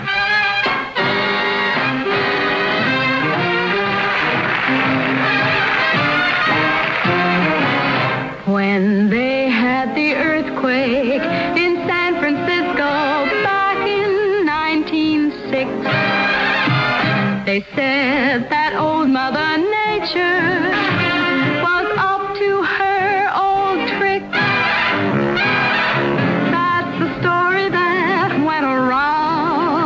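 Nothing in the audio stood out as a fault on listening.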